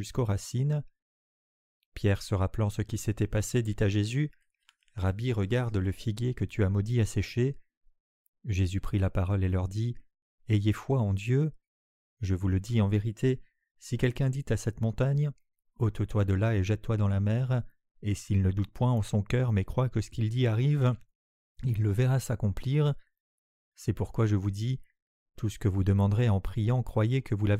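No technical faults occur anywhere in the clip.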